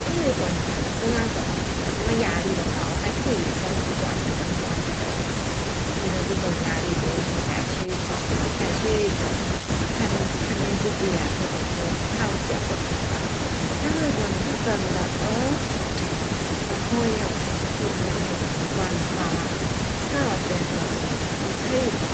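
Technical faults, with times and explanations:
No faults to report in this call-path speech.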